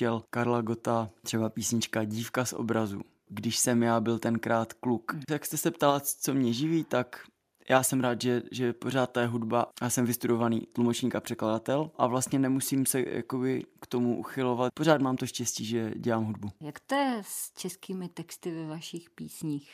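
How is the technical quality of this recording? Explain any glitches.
Nothing went wrong technically here; I listened for glitches in the speech and there aren't any to explain.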